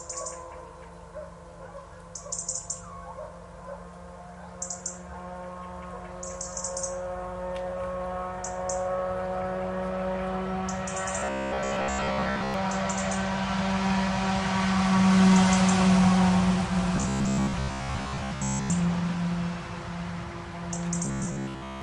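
Audio likely arrived too seldom, so a roughly 15 ms buffer was replayed in place of most real audio, producing robotic sound from repeated short buffers: a rigid metallic buzz at 66.8 Hz from 11.19 to 12.54 s, 16.96 to 18.70 s, and 21.05 to 21.82 s.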